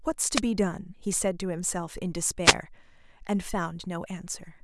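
At 0.34 to 0.41 s and again at 2.44 to 2.54 s, short bursts of static swish over the speech. These are wireless microphone noise hits: reflected radio paths cancel, the FM signal fades, and receiver noise surges through.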